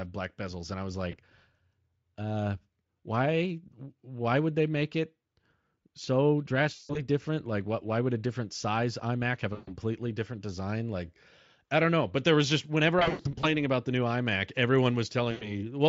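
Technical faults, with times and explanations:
1.11–1.16 s, 6.75–7.01 s, 9.53–9.75 s, 12.99–13.47 s and 15.31–15.53 s: VoIP packet loss concealed by the speech codec. Each time, the decoder guessed across 20 to 260 ms of missing audio by repeating its last pitch and filter at a falling level. That gives a buzzy or noisy, smeared fade, and the sound stays weak for a moment after the stream recovers. The Speex coding itself shows no more than faint damage around these drops.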